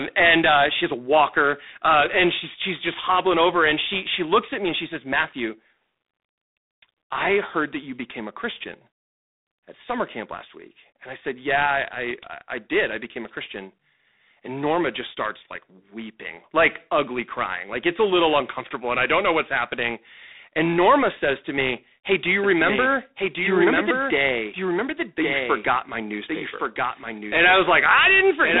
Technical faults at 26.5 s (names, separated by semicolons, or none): G.726 ADPCM; doubled audio track